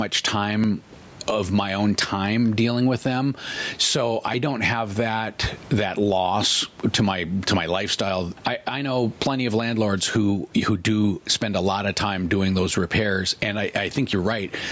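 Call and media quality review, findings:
Gain pumping throughout: mic gain likely set far too high, fast limiter clamping each loud syllable. Gain swings roughly 15 dB; dynamics squashed.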